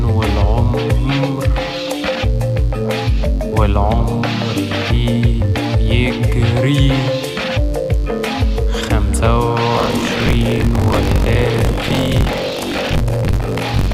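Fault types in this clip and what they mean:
Mains buzz, throughout: spiky interference leaking in twice per 50 Hz mains cycle, so harmonics of 50 Hz stack up into a steady, raspy buzz sitting about 30 dB below the sound and running under the whole clip from start to finish.
Buffer tearing, 9.73 s to the end: the writer and reader of the playback ring buffer cross inside every period, so most of each buffer replays audio from around 40 ms earlier, giving a robotic rattle at 46.9 Hz that fits a 1024-sample buffer.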